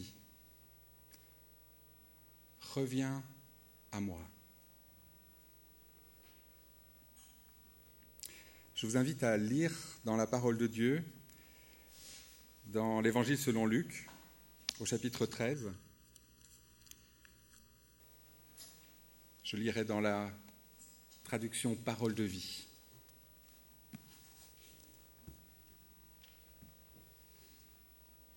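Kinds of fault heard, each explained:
Channel delay (comb filtering): from 15.54 to 18.00 s one channel lags the other by a fraction of a millisecond, and summing them to mono carves evenly spaced notches starting near 700 Hz, leaving the sound hollow. Unlike flanging, the notches stay fixed rather than sweeping.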